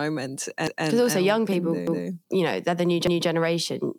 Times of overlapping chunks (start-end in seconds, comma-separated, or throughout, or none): 0.67-0.87, 1.87-2.07, 3.07-3.27